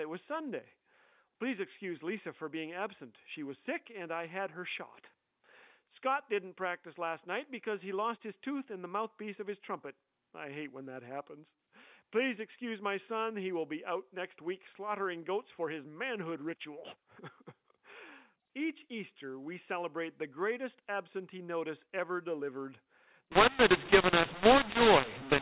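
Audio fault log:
23.32–25.41 s, mu-law and A-law mixed up: the final stretch of speech turns abruptly harsh and gritty, with the gaps between phrases filling with hiss instead of falling quiet. The bytes were encoded with A-law but read back as mu-law, so each companding step maps to the wrong amplitude. Some levels come out too loud and others too soft, and near-silent samples are pushed well above zero. Before this point the narrowband sound fits ordinary A-law telephone coding at 8 kHz.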